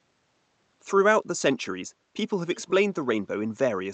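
From 2.56 to 2.74 s, a faint, delayed copy of the speech returns about 287 ms late, well below the direct voice: an echo leak, likely from a loudspeaker far end whose echo canceller let residue through. Unlike room reverberation, it's a distinct repeat, band-limited like the 8 kHz call audio.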